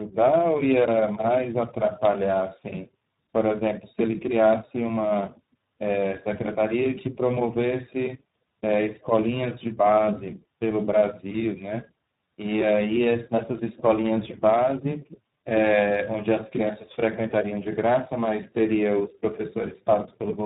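Speech with tandem speech coding throughout: rough, muffled, warbly, nothing above 3.8 kHz. It is harsher than one codec, which fits two speech codecs in a row, likely ADPCM then iLBC.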